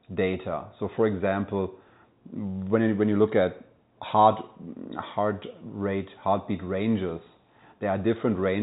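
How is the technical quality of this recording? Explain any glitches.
No glitches turn up anywhere in the recording. The speech comes over a G.711 telephone path, which limits it to the narrow phone band with nothing above 4 kHz, and any codec damage is faint at most.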